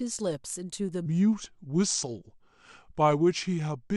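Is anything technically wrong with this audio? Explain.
Yes. From 1.06 s onward there's a section at the wrong speed. It plays at 0.795x, likely from a clock mismatch, so the speech drops about four semitones and drags.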